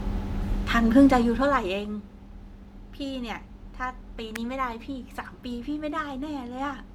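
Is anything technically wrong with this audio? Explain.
Yes. At 4.36 s a sharp snap cuts across the speech, an electrical switching spike lasting about 5 ms. It is likely an arc from a nearby switch or motor coupling into the audio line. The waveform shows a narrow vertical spike, and the spectrogram a thin broadband stripe.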